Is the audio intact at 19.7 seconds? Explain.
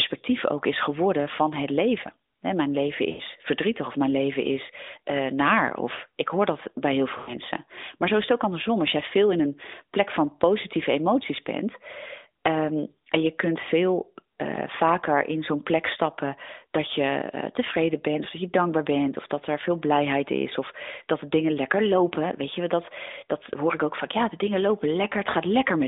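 Yes, the audio is intact at 19.7 seconds, with no fault there beyond the narrow 250 Hz to 3.7 kHz telephone band of the AMR narrowband mobile codec the speech passes through.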